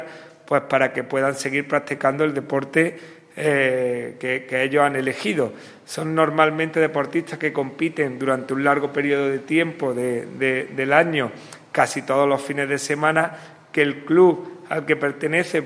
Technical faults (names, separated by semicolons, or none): none